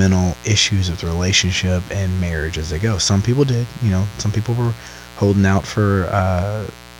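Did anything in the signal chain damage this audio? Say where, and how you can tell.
Yes: mains buzz entered in the analogue wiring. A raspy 60 Hz buzz, roughly 20 dB under the speech, persists throughout, with spectrogram harmonic lines reaching several kHz and waveform spikes 120 times per second.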